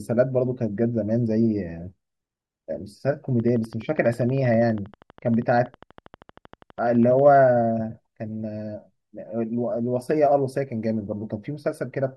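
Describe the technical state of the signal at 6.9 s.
At 6.9 s the signal is inside a train of clicks that runs from 3.40 s to 7.36 s. The clicks come at a steady 12.4 per second, about fifty in all, each with much the same sharp shape. They peak at roughly the level of the speech itself. So they tick audibly over the talking and through the gaps between phrases. The likely source is electrical interference or a faulty connection or power supply injecting repeated pulses.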